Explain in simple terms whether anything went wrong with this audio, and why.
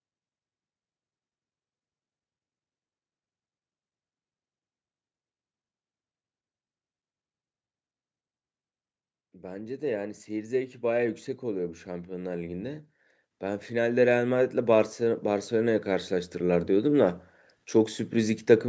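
Automatic gain rising happened twice: the call's level control judged the speech too quiet, so voice and background swell together from 9.4 to 12.9 s and again from 13.7 to 17.2 s.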